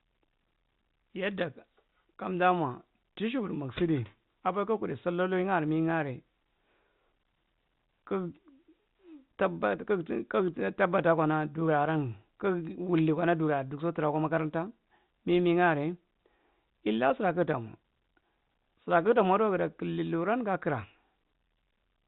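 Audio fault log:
Nothing in this speech recording stood out as a fault on listening.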